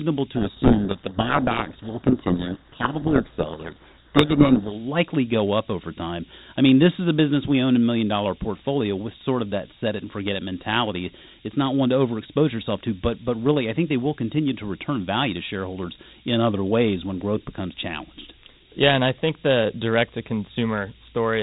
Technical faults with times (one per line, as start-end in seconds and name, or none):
0.34-4.79 codec payload misread